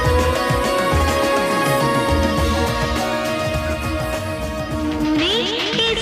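No audible technical fault occurs anywhere in the signal, which holds steady from the first moment to the last without any break or disturbance.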